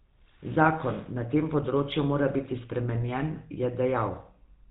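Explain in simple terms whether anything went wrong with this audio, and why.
GSM full-rate codec damage runs through the whole recording, from start to finish. This is the old mobile-phone way of squeezing speech: it rebuilds the voice from a simple model of the throat and mouth, driven by a coarse train of pulses instead of the real sound. Everything above 4 kHz is thrown away, so the speech sounds muffled, and the crude pulses give it a clearly audible buzzy, gravelly roughness.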